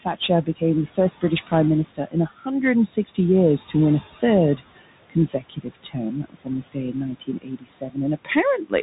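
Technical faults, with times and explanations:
Throughout: noise suppressor artifacts. Background drops by about 17 dB between phrases, then pumps back under the speech, over room noise sitting about 17 dB down.
Throughout: Bluetooth CVSD headset codec. Nothing gets past 3.8 kHz, s sounds come out scratchy with a grainy hiss underneath, which fits a 64 kbps CVSD headset link.
0.01–1.53 s, 1.85–2.48 s, 4.56 s to the end: speech cut by the noise suppressor. Soft bits are mistaken for noise and ducked by up to about 16, 18 and 21 dB, so consonants and word endings sound swallowed. The last stretch is worst, with well over a second affected.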